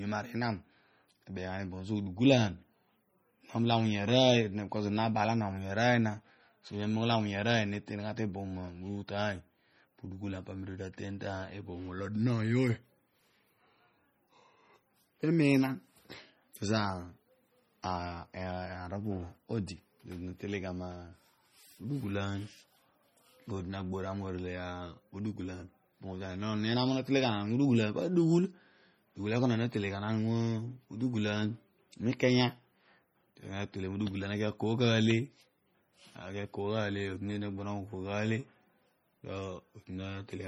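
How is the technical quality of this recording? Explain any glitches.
The recording is clearly degraded by heavy lossy coding across all of its roughly 40 seconds of speech. MP3 compression, present throughout, is the likely cause. The encoder appears to have run at a very low bitrate, consistent with about 32 kbps, so it spent its few bits on the strongest frequency lines and discarded weaker ones, which then flicker in and out between frames. That leaves the speech watery and swirly, with metallic chirps on s sounds and smeared consonant onsets. There is also no content above 20.9 kHz.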